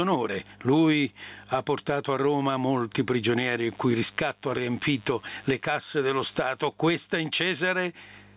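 From the start, the level never sits still. It swings by around 15 dB, so the speech sounds squashed. That's gain pumping, likely from input gain set far too high with a fast limiter clamping down on every peak.

Right after "molti prigionieri", from 3.68 to 6.66 s, a thin, steady buzz sits under the speech, quiet at roughly 40 dB below it. It's DECT cordless phone buzz: a nearby handset or base bursts every 10 ms, the audio circuitry rectifies that, and you hear a 100 Hz tone with lots of harmonics, all within the call's 4 kHz band.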